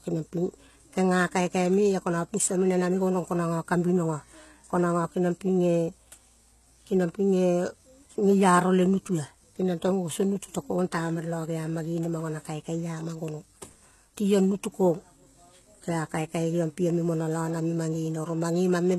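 Speech clip with a gritty, metallic top end and nothing above 12.3 kHz throughout, likely HE-AAC compression at a low bitrate, something like 16 kbps.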